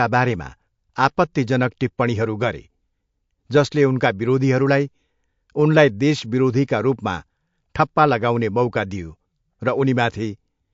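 Throughout the speech, there is plainly audible MP3 compression damage. Nothing is heard above about 7.5 kHz, so the top end sounds dull and boxed in. The s sounds lose their crispness and turn metallic. The audio has a watery, swirling edge as quiet detail flickers in and out. Consonant onsets smear rather than snap. This is likely a low-bitrate MP3 encode, which fits something around 48 kbps, where the encoder starved the treble and weak detail of bits.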